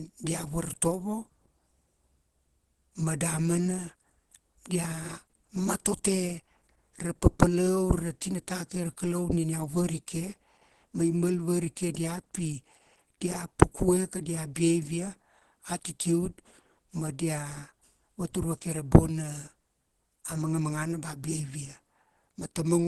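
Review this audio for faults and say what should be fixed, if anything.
Opus compression, throughout the clip: the speech sounds muffled and hoarse, with plainly audible codec damage and nothing above 12.1 kHz. This is likely Opus in its hybrid speech mode with a super-wideband limit, which fits a bitrate around 16 kbps. To prevent it, encode at a higher Opus bitrate so the encoder keeps full bandwidth and stays out of its low-rate speech mode.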